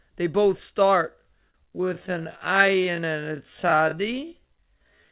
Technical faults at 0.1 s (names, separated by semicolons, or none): none